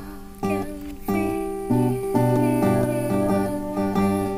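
A doubled audio track appears at 2.03 s and runs to the end: a full-band second copy of the audio trails the original by about half a second, roughly 5 dB quieter, starting abruptly with no decay or room colour, likely from a slower second capture path.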